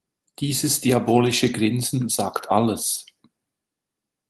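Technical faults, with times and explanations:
No technical faults are present in the speech, which has passed through an Opus call path whose audio band tops out at 12 kHz, consistent with a setting of around 32 kbps.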